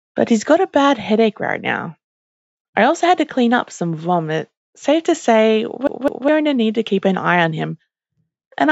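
From 5.87 to 6.28 s the sound stutters: a slice of about 206 ms plays twice in quick, even succession with a brief mute at each jump. This is a CD stuck on one turn, where a scratch sends the laser back one track on each rotation. The band-limiting to 8 kHz comes from call microphone processing and is not a fault.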